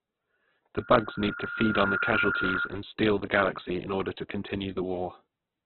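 Heavy codec damage runs throughout the speech, with nothing above 4.2 kHz. Tones sound grainy and noisy, likely Opus compression at a very low bitrate.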